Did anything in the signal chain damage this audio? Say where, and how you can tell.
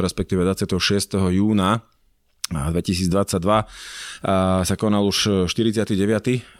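No, nothing along the chain seems to have touched this speech recording, as there's no sign of damage at any stage I can pick out.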